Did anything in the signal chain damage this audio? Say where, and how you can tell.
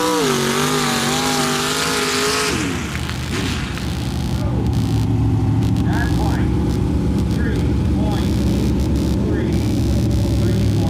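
Yes. The damage is in the analogue wiring. Computer activity noise runs through the whole clip. A buzzing, chirping texture pulses around 70 times a second. It sits roughly 20 dB below the wanted sound. It does not follow the audio itself. It tracks the computer's workload instead. Changing current draw from the processor, graphics card or mouse shifts the ground that the audio circuit shares with the computer. That ground movement lands directly on the signal.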